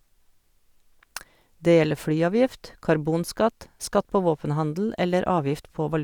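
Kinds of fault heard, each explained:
No technical faults can be heard in this speech.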